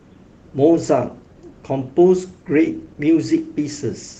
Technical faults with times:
none

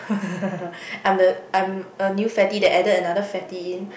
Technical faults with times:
2.40-2.93 hard clipping

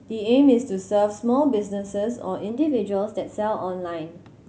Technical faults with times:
2.49-4.48 drift correction step

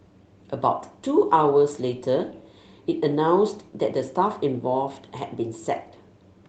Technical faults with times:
none

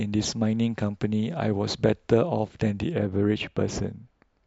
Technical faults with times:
2.93-4.46 de-emphasis applied wrongly

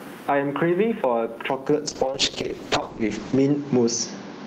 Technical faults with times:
0.00-4.46 gain pumping
0.00-1.50 input switched to a poorer device
1.90-4.46 call bitrate drop

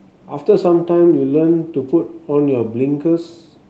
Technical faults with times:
none

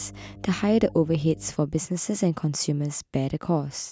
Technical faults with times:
0.00-1.50 mains hum

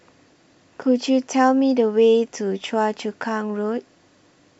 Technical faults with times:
none

